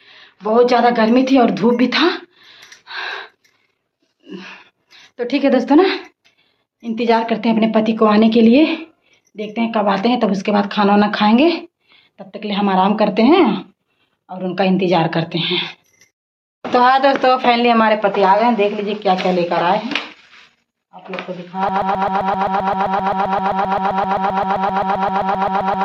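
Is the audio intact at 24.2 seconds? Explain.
No. At 24.2 seconds the playback or stream has most likely stalled and keeps resending the last fragment it held, a broken-record loop that runs from 21.69 seconds to the end of the clip. A slice of about 0.13 s plays over and over, back to back, so the audio stutters in a rigid, mechanical rhythm. Whatever should have sounded during those last four seconds is gone, replaced by the same repeated piece.

The gain pumping that runs through the whole clip is also present at this moment. The input gain likely sits far too high, and a fast limiter or compressor clamps it down on each loud moment, swinging the level by around 10 dB. The audio is left flattened and squashed, with loud and soft passages pressed close together.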